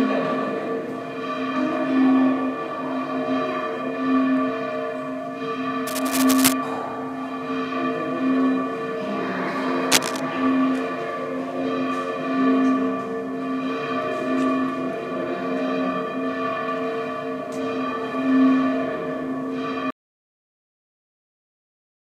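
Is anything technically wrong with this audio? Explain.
Yes, there are two problems: bursts of cable scratch noise in two places, and an audio dropout to silence at the end.

The cable scratch noise runs from 5.87 to 6.53 s and again from 9.91 to 10.20 s. It is dense, uneven rustling at roughly the same level as the sound itself. The likely cause is a worn cable, connector or control being moved, with its contact resistance fluctuating quickly. Unlike a single click or pop, it is a rough, crackly texture that lasts a fraction of a second and then stops.

The audio dropout to silence begins at 19.90 s and lasts to the end of the clip, about 2.2 s. The sound stops abruptly mid-flow and is followed by complete silence, with no room tone, because the input was likely lost while recording continued. A fade-out or noise gate behaves differently: a fade tapers gradually, and a gate usually leaves some background or reopens, whereas this cut is instant and never recovers.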